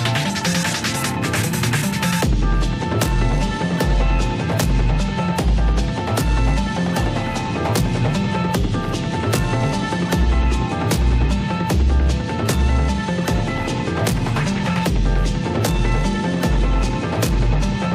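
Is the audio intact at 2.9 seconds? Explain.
Yes, the audio is intact at 2.9 seconds, with no dropout, click, distortion or other fault at that point.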